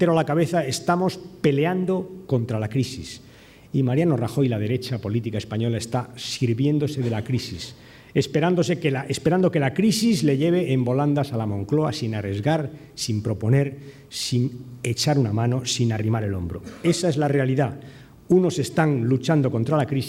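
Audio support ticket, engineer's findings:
Nothing stood out on listening; no faults to log against this audio.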